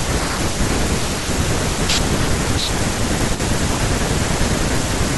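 Speech, with a brief level dip between 3.35 and 3.40 s. For about 50 ms the signal falls abruptly by about 6 dB and then snaps back, a short notch in loudness. The cause is likely one channel dropping out: with one stereo channel lost for that moment, the mono sum keeps only half of the shared content, which is exactly a 6 dB drop. Any material carried only in the missing channel vanishes for the same interval.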